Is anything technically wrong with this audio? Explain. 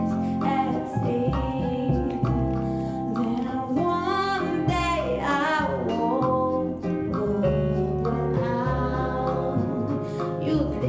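No, nothing is technically wrong with this audio; the absence of content above 8 kHz is simply what a wideband call path produces.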